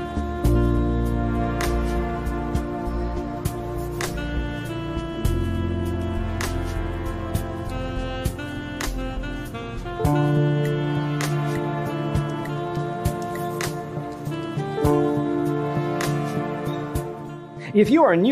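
No technical faults are audible.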